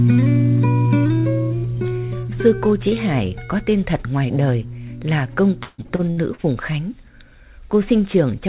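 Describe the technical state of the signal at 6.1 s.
At 6.1 s you're in the middle of a burst of repeated packet loss (robotic sound) running from 5.63 to 6.47 s. Seven holes get patched by stretching the previous sound, the longest about 151 ms, covering roughly 43% of the stretch. That's why it turns choppy, with chunks missing.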